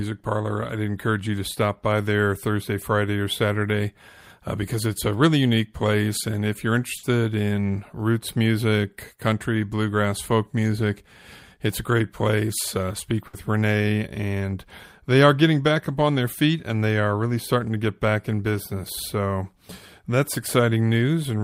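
Bursts of packet loss at 6.97 s, after "if you're", and 13.27 s each drop 60 ms of speech, concealed with a fading continuation before the speech jumps ahead.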